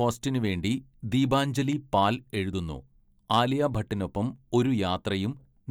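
A stage in the signal chain was driven about 3 dB past its limit in this speech clip, so from 3.31 to 3.40 s the peaks are sliced flat. That hard clipping adds high harmonics, heard as a short, gritty crackle on the loudest moments.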